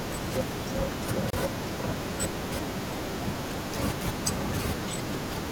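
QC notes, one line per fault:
1.30 to 1.33 s, gap at a join of encoded pieces: the speech drops out for about 30 ms, then resumes exactly where it stopped. Two separately encoded chunks were joined untrimmed, so encoder start delay and end padding leave a hole with smeared edges.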